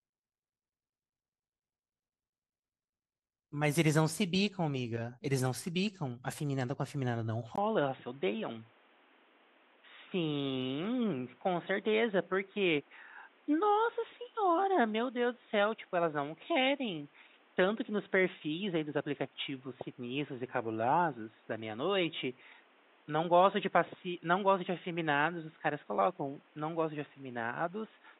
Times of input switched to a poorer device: 7.56-28.19

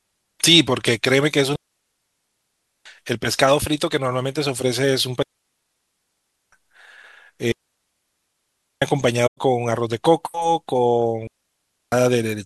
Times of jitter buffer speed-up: none

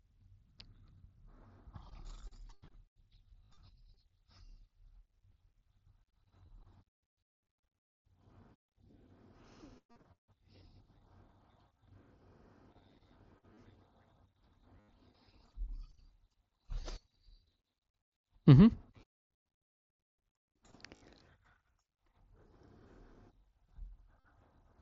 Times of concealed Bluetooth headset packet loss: 3.45-3.50, 6.46-6.48, 9.91-9.96, 13.54-13.57, 14.80-14.88, 20.96-21.02, 24.20-24.25

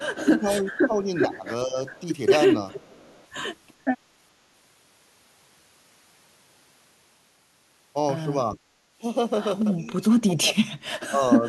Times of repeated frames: none

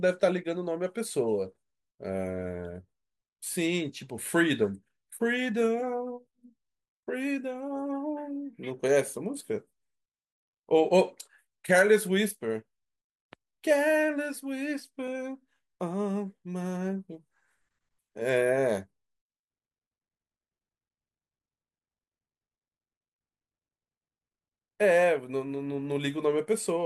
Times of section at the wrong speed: none

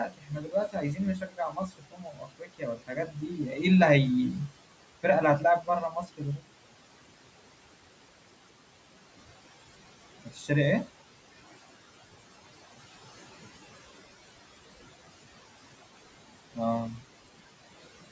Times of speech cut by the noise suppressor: 0.06-3.39, 5.90-6.44, 10.25-10.50

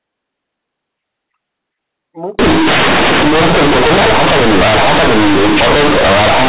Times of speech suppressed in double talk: none

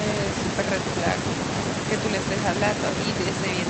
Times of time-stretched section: none

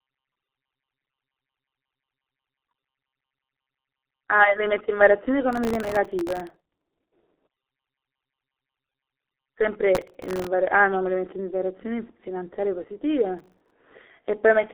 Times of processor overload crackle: 5.53-6.94, 9.95-10.47, 13.39-13.71

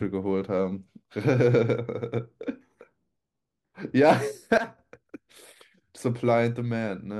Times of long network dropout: none

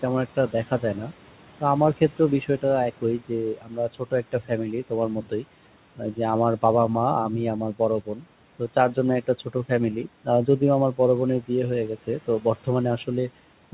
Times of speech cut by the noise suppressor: 3.01-4.51, 4.90-5.45, 7.79-8.25, 8.59-9.71, 10.03-10.61, 12.07-12.67

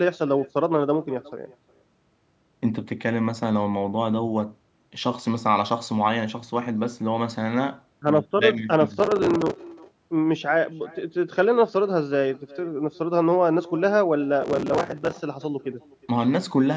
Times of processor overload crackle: 8.94-9.60, 14.42-15.12

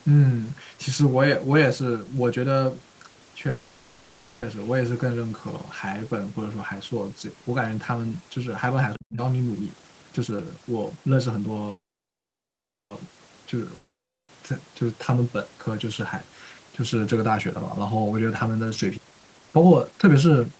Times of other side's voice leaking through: none

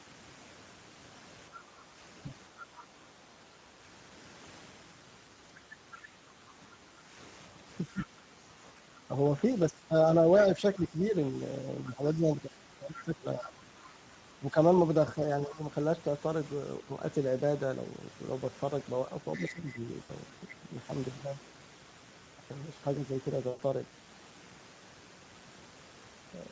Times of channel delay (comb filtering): none

